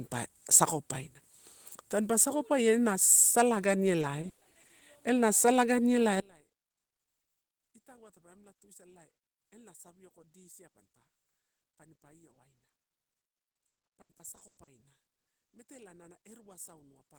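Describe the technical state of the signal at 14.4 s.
At 14.4 s the speech sits inside a burst of repeated packet loss (robotic sound) running from 13.19 to 14.69 s. Eighteen gaps were patched by extending the last sound, about 680 ms in all, roughly 45% of the stretch, the longest 100 ms. It sounds choppy, with pieces missing. On a spectrogram it shows as smeared, frozen harmonic bands broken by abrupt seams.

The speech has also been very quiet since 6.2 s, about 29 dB down, because centred content is cancelling. This is likely one channel inverted, with the two channels summed to mono. The waveform looks collapsed, and the spectrogram shows only faint residue left.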